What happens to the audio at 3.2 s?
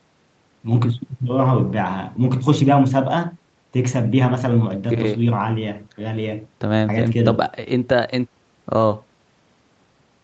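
Nothing goes wrong at 3.2 s; the speech there passes intact through the normal call processing, with its top end limited to about 8 kHz by the call path.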